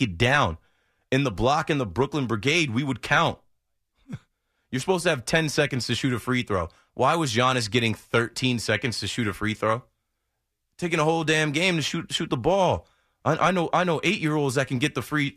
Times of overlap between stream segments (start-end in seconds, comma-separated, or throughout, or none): none